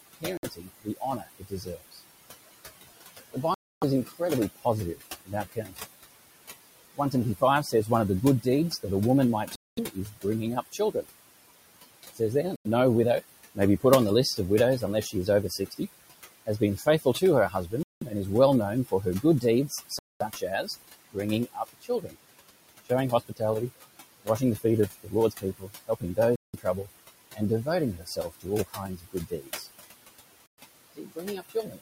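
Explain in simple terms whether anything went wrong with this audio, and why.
Three things went wrong in this speech recording.

Noise suppressor artifacts run through the whole clip. A noise-reduction stage keeps pushing down whatever it judges to be steady background hum, adjusting many times a second. The room noise behind the talker therefore doesn't sit at a constant level. It drops away in the pauses and comes back under the speech.

Speech cut by the noise suppressor happens in five stretches: 0.21 to 2.01 s, 3.33 to 5.84 s, 6.97 to 11.06 s, 12.03 to 29.67 s, and 30.97 to 31.80 s. In each, the same processor mistook parts of the talking for background noise and turned them down with it. The effect is patchy rather than continuous, adding up to roughly three seconds in the long middle stretch and well under a second in each of the others. Quiet consonants and word endings sound swallowed or faded.

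Bluetooth stalls are the short dropouts to complete silence at 0.37, 3.54, 9.56, 12.56, 17.83, 19.99, 26.36 and 30.46 s. They last between about 60 and 280 milliseconds, and the sound then carries on. The likely cause is the wireless headphone link: interference delayed some audio data, the headphones ran out of buffered sound, and playback paused until the missing data arrived.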